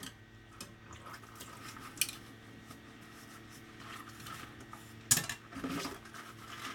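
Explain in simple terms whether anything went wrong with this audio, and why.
Nothing went wrong here: the audio signal arrives intact, with no dropouts, distortion or glitches anywhere in the recording.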